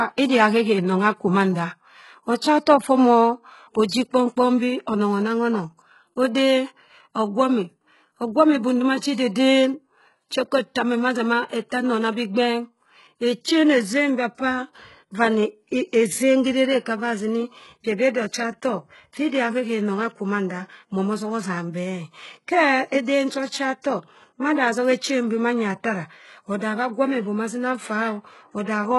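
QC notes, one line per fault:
Throughout: HE-AAC compression, heavy damage. The speech treble above the core band sounds synthetic rather than captured, with s sounds coming out gritty and lispy, and nothing at all above about 11.5 kHz. The likely cause is low-bitrate HE-AAC, roughly what a 12 kbps stream would give. Only the lower spectrum is coded directly and the top is rebuilt by spectral band replication, so the copied harmonics don't align across the crossover.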